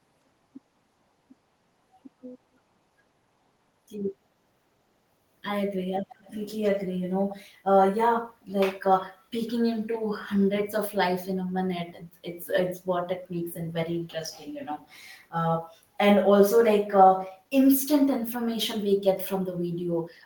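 Echo leak, from 6.09 to 6.39 s: a faint, delayed copy of the speech trails the original by 160 ms, sitting well below the direct sound and lasting only about a third of a second. The likely cause is a far-end loudspeaker whose output reached its own microphone, with the echo canceller there failing to subtract all of it, so a residual scrap was transmitted back and is heard as a brief, quiet ghost behind the speech.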